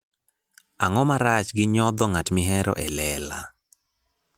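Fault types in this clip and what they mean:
No faults can be heard.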